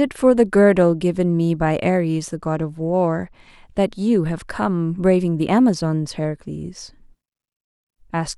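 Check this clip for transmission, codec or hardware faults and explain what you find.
One fault stands out, a Bluetooth SBC bit pool drop from 2.22 to 3.50 s. Across that stretch the speech loses its treble and turns dull, with a gritty, grainy noise riding under it until the quality snaps back. The link's encoder has cut the bits it spends per frame. The highest sub-bands get little or nothing, and the remaining bands are quantised coarsely. The sound fits a fall from bit pool 31 to around 13, roughly 94 kbps.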